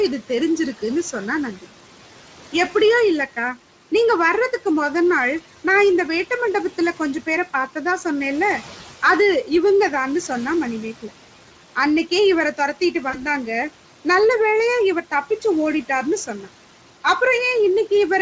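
Noise suppressor artifacts run through the whole recording. The suppressor works frame by frame, treating whatever energy looks steady in each frequency band as noise and turning that band down. The room noise, sitting about 20 dB below the speech, drops by about 12 dB in the pauses and rises back up whenever the talker resumes. This makes the background pump audibly in step with the speech instead of staying at a constant level.

VoIP packet loss concealed by the speech codec occurs from 13.09 to 13.22 s. About 40 ms of audio went missing, which fits two 20 ms frames. The decoder filled the gap by repeating its last pitch and spectral shape at falling gain. That produces a short, stretched sound, a buzzy tone or coloured noise, that fades out. Because each decoded frame depends on the one before, the speech stays weak or distorted after the gap before recovering by 13.22 s.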